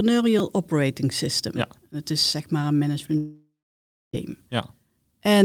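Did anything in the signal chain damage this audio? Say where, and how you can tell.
Yes. At 0.39 s there is a brief click-like buzz in the speech, where one tiny slice plays three times with hard joins. This is a repeated buffer at the driver or buffer stage: new audio arrived late, so the last 5.8 ms block was replayed, which fits a 256-sample buffer, and about 10 ms of audio was lost.

After "is zeg maar een", from 3.17 to 4.15 s, the last sound carries on as a fading buzz, then about 0.63 s of silence follows before the speech resumes with 960 ms gone. This is most likely a long network dropout, with the receiver filling the gap with concealment until it gave up.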